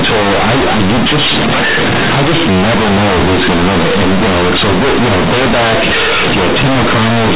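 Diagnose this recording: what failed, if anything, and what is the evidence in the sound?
Sample-format conversion failed: the A-law bytes are played as plain linear 8-bit samples with no expansion, so the companded audio is read as linear. Throughout, the speech is loud, buzzy distortion. Each sign change swings the output across half its range, so quiet parts match loud ones and pauses fill with noise.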